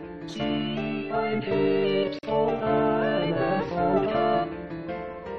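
At 2.19 to 2.23 s, a gap at a join of encoded pieces: separately encoded segments were joined untrimmed, leaving a 44 ms silence with smeared edges before the sound resumes.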